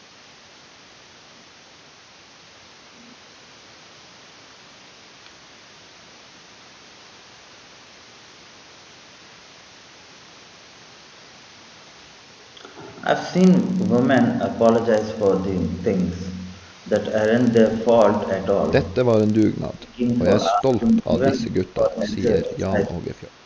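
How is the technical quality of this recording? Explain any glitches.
The recording has two real problems: a steady buzz that runs the whole way through, and a stretch near the end where the talker keeps getting turned down.

First, a filter restarted on every block. Some stage in the chain drops its memory at each block boundary and starts cold, so every block opens with a tiny transient. Those ticks land about 31.2 times a second, which fits a 512-sample buffer, and they fuse into a low buzz that gets louder and quieter along with the speech.

Second, the speech is suppressed in four bursts: 19.47 to 20.05 s, 20.49 to 21.2 s, 21.36 to 22.23 s, and 22.43 to 23.23 s. The level sinks by about 30 dB in the first, about 25 dB in the second, and about 20 dB in the last two, with roughly half a second or more of each burst affected. The pattern points to likely double talk: the echo canceller couldn't tell this talker apart from loudspeaker echo while both sides spoke, so it ducked everything. 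The missing lowest bass is just the normal call microphone processing.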